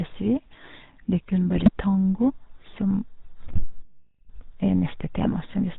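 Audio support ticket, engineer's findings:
GSM full-rate codec, whole clip. Buzzy, gravelly texture on the speech. Nothing audible above 4 kHz. Fits 13 kbps GSM full rate. The decoder rebuilds the voice from a vocal-tract filter fed by sparse, regularly spaced pulses. Two-thirds of the excitation samples are discarded, hence the rasp. Codec damage plainly audible throughout.

GSM bit errors, 1.54–1.71 s, just before "tango som". Squawks and gargling, level jumps. Span fits about seven 20 ms frames hit. Corrupted filter, pitch and gain parameters reach the decoder. Spectrum bends, frames blow up. Error rate sounds like a few percent.

GSM bit errors, 3.42–3.69 s, right after "tango som". Same gargled, popping breakup. Longer, roughly nine frames' worth.

GSM bit errors, 5.22–5.35 s. Short squawk burst, about six frames. Same decoder corruption.

Playback stall, 3.82–4.29 s. Speech cuts out mid-flow. 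Dead silence for about 0.47 s, then resumes. Likely cause: player buffer underrun or a blocked output thread. Output halted until data returned. Follows the second bit-error burst closely.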